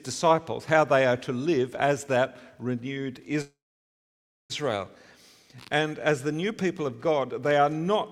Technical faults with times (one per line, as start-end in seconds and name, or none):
3.41-4.52 call audio freeze